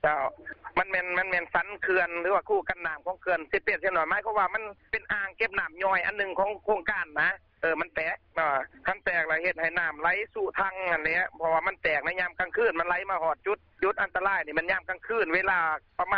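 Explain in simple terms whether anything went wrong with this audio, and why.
Nothing went wrong here; I listened all the way through and didn't catch a single glitch, dropout or odd noise anywhere in the audio.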